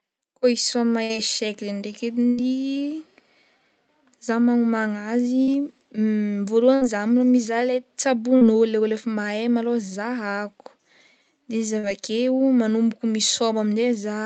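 Burst of packet loss at 1.03, 2.29 and 6.75 s in this speech recording: 60 to 80 ms never arrived, so the receiver stretched and faded the last sound before skipping ahead. Short concealed packet loss at 5.43 s, 8.37 s just before "le ôlo efa" and 11.79 s just after "de izy": about 40 ms was patched from the preceding sound, leaving a brief smear.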